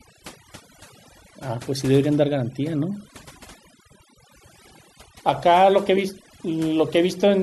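Overdone noise removal runs through the whole clip. The noise reduction was set too aggressively, so any frequency band sitting close to its noise estimate gets pulled down hard or switched off, taking quieter parts of the speech with it. Gaps fall to near silence dotted with twinkling specks.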